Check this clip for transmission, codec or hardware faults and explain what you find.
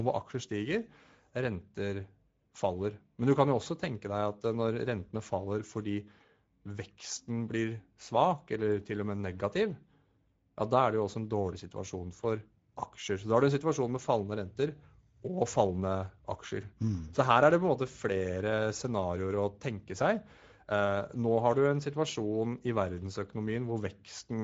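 One fault runs through the whole recording: Speex codec damage from start to finish. Speex is a CELP coder. It models speech as a filter driven by an excitation signal, and here too few bits reach that excitation, which fits a bitrate of around 17 kbps. The damage is plainly audible: the speech sounds noisy and hoarse. Nothing is present above about 7.7 kHz, and the band above 4 kHz is a shaped, noise-like fill rather than real detail.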